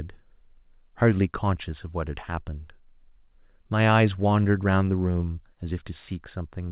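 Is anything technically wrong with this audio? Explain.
No, nothing stood out on listening to this speech, which has the narrow telephone-band sound of a G.711 call path with nothing above 4 kHz.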